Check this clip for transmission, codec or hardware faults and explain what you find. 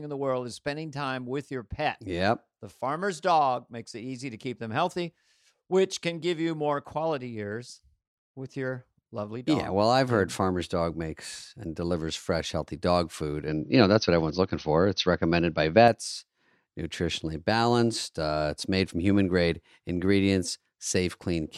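One fault, in the speech from 13.48 to 15.88 s: the input likely switched to a poorer device and then back. The substitute device passes nothing above 6.2 kHz, so the voice turns dull and boxy for those seconds. It also shifts the level by a few decibels and brings its own faint background noise, well below the signal. The switch is seamless, with no gap at either change.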